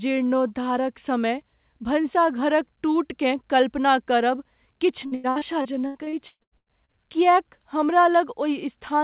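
Speech, and from 5.06 to 6.93 s it breaks into repeated packet loss (robotic sound): over a dozen short holes, the longest about 120 ms, each patched by stretching the preceding sound, so roughly 40% of that stretch is synthetic fill. Unlike a single dropout or clean silence gaps, the rapid succession of smeared repeats gives a choppy sound with pieces missing. The band-limit at 4 kHz, which fits a narrowband G.711 call path, runs throughout and is separate.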